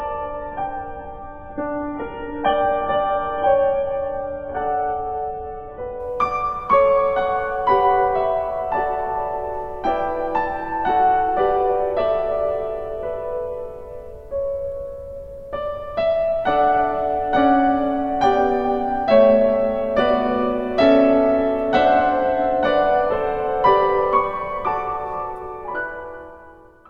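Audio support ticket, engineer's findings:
Dull, band-limited sound 0.0–6.0 s, nothing above 3.7 kHz, heavy codec artefacts, then abrupt jump to full treble with no gap. Adaptive stream starting at a low bitrate: player opened on a very low rung (fits roughly 8 kbit/s AAC), stepped up near 96 kbit/s once throughput was measured.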